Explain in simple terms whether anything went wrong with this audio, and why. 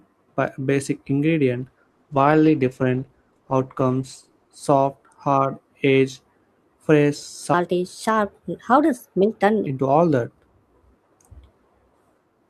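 Two things went wrong in this speech recording.

From 1.57 to 6.01 s there is a call bitrate drop. The call's connection estimate fell, so the sender was told to squeeze the voice into far fewer bits. With so little room, the speech is coded coarsely. It loses its crisp top end and sounds rough and muffled. It is at its worst for about 2.9 seconds, then clears as the connection recovers.

From 7.54 to 9.67 s, just before "all that", there is a section at the wrong speed. This stretch plays about 1.26 times too fast. Because speed and pitch move together, the voice sounds hurried and clearly higher, by roughly four semitones. The likely cause is that this part was played or edited against the wrong clock. Normal speed returns at 9.67 s.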